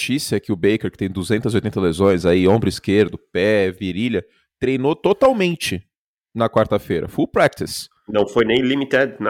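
Hard clipping hits this speech at 2.04–2.56, 2.99–3.02, 5.06–5.44, 6.58–6.62, 7.37–7.47, 8.19–8.57 and 8.94–9.02 s. Each time, the peaks exceed the stage's limit by about 2 to 4 dB and are sliced flat. The added high harmonics give a brief crackle on the loudest syllables.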